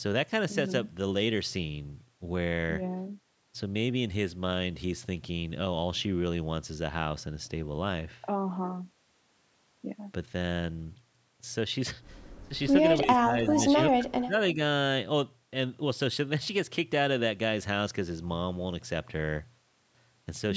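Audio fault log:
12.48–12.54 s and 13.04–14.34 s, speech suppressed in double talk: the voice briefly dips by roughly 15 dB, then repeatedly fades and cuts in pieces, up to about 30 dB down, for around 0.7 s in total, likely while the far side talked and the echo canceller ducked both. Unlike a dropout, the level sinks and recovers rather than hard-muting.
13.54–13.66 s, echo leak: a short, faint copy of the voice returns about 307 ms later, some 10 dB below the speech, likely loudspeaker pickup the canceller failed to remove. Unlike suppression, this adds sound instead of removing it, and it is a delayed repeat rather than a smear.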